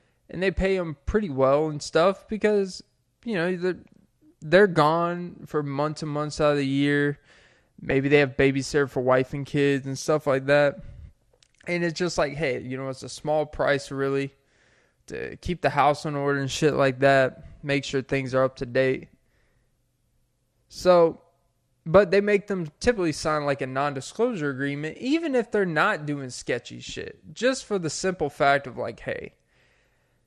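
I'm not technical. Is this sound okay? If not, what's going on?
No. The whole recording sounds dull and muffled, with a clearly audible gurgly, grainy roughness on the speech. This is most likely MP2 compression, an older digital-radio format that saves space by dropping the upper frequencies and storing what remains only roughly.

Between 7.89 and 7.91 s, just before "they have babysitter for", there are a few brief watery blips. This is DAB burbling: a weak radio signal let a few errors slip into the data, so short blips of noise appeared in parts of the sound.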